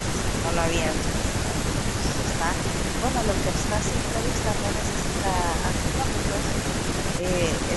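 A speech recording in which the talker's level dips briefly at 0.16, 1.25, 2.0, 2.28 and 5.22 s, each dip lasting only tens of milliseconds and pulling the sound down by around 10 dB (less at 5.22 s). This is likely speech suppressed in double talk, where an echo canceller mistook the talker for loudspeaker echo and turned both down.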